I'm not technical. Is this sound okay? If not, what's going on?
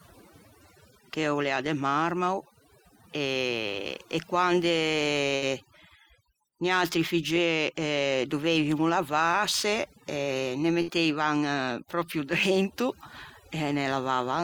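No. Overdone noise removal runs through the whole clip. The cleanup was set too strong. The background drops and breaks up into twinkling specks.

There are two bursts of packet loss, at 5.35 s, just after "e quande", and at 10.82 s. Each time, about 60 ms of speech is missing. The last sound is held briefly and faded, then the speech jumps ahead.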